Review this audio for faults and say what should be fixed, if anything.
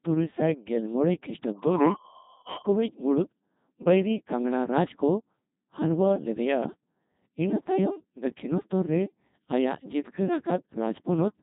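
Throughout the speech, the sound is robotic and buzzy, with heavy damage and nothing above 3.8 kHz. This is the Codec 2 vocoder: the decoder rebuilds speech from sine waves using only pitch, voicing, energy and a spectral envelope, so the waveform is lost, and the thinness points to a 2.4 kbit/s mode. To prevent it, record or transmit through a waveform codec at a higher bitrate instead of a low-rate vocoder.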